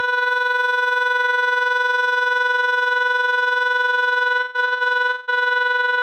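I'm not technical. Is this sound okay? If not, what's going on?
No. Between about 4.39 and 5.30 s the music hits repeated stalls (stutter): it hiccups five times, holding on to the last bit of sound each time, fading it in the longer holds, before moving on. The longest hold lasts about 0.19 s, and the holds fill roughly half of that stretch. Nothing is actually lost, unlike dropouts, where pieces vanish or go silent. Here the sound arrived too slowly to keep up, so playback kept pausing to wait.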